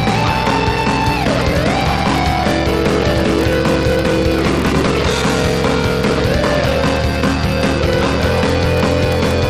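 The audio carries a block size mismatch (padded) from start to finish. A steady buzz at about 43.1 Hz sits under the sound. The audio also runs slow, at 0.861 times normal speed, yet its pitch stays about right. One stage writes shorter blocks than the next one reads. Zeros fill the remainder of each block, leaving a small gap every cycle. The buzz rate points to 1024-sample reads at 44.1 kHz.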